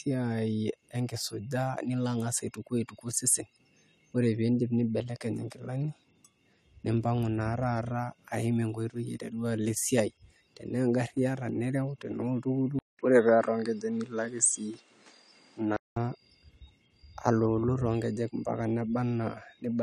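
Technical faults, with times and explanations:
12.79 to 15.96 s: input switched to a poorer device, likely. After a 200 ms silence the speech loses everything above 10.5 kHz and gains a new background noise about 35 dB below it, with unchanged loudness. Full bandwidth returns at 15.96 s.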